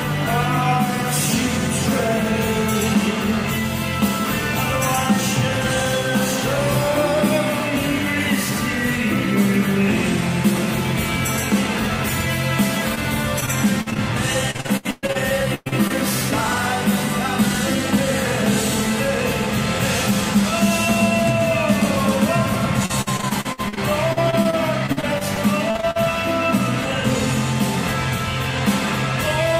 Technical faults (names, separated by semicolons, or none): short concealed packet loss; repeated packet loss (robotic sound); burst of packet loss